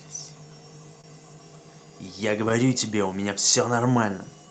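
From start to finish, the speech carries clock drift between sender and receiver: the sending clock runs roughly 3% slow, so the receiver's jitter buffer keeps running short of audio. To compensate, the receiver keeps stretching the stream, and the pace sags slightly and unevenly rather than holding steady. On a waveform, syllable spacing looks a little loose and irregular. On a spectrogram, the harmonic traces carry faint seams where material was lengthened. The audio above roughly 8 kHz is absent, which fits an Opus call path at about 32 kbps.

The repeated timing corrections run from 0.13 s to 4.48 s, playing the stretch at about 98% speed and adding roughly a tenth of a second overall. Each correction lengthens a small piece of sound, always in the same direction but at uneven spacing. The ear catches them only as a slightly dragging, hesitant tempo with occasional tiny hiccups. On a spectrogram, some steady vowel regions appear marginally elongated. 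The waveform shows matching joins where periods were duplicated to stretch the flow.

At 1.01 s comes a short stall from a late packet. The buffer ran dry, so the receiver held the last sound for 27 ms until the data arrived, then resumed from the same point with nothing lost. It is heard as a brief frozen, faintly buzzy hold. On a spectrogram, this shows as a short horizontal smear of unchanging harmonics. On the waveform, it appears as a run of near-identical repeated cycles.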